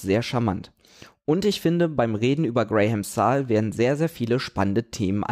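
No technical faults can be heard in this speech recording. Nothing in the audio points to a problem anywhere along the signal path.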